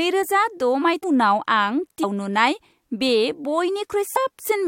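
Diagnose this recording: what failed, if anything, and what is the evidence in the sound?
The failure is at the codec stage: damaged data in the compressed speech stream. Brief blips occur at 1.02 s, at 2.02 s, and from 4.16 to 4.18 s. At each point the decoder met corrupted frame data, lost sync, and misread or dropped frames until it found the next valid frame header.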